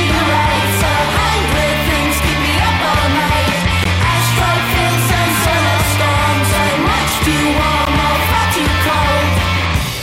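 At 3.84 s and again at 7.85 s the sound drops into a gap between chunks, each hole about 13 ms long and roughly 4 s apart. Every 4-second block resumes slightly late, leaving silence that shows as hard-edged blank vertical stripes on a spectrogram and flat zero-line notches in the waveform.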